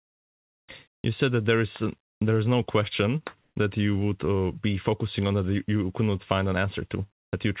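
Speech carried over a narrowband call path, with nothing above 4 kHz, so the spectrogram shows a hard ceiling there. Two short pauses, 0.92 to 1.04 s and 3.41 to 3.56 s, have comfort noise in place of the background, likely from discontinuous transmission. The real background drops out and a steady, featureless hiss fills the gap. In the first pause the background sits about 71 dB below the loudest speech, and the level shifts by about 14 dB. In the second the shift is only about 1 dB. On a spectrogram each gap is a smooth, textureless band, and on the waveform it is a uniform fuzz.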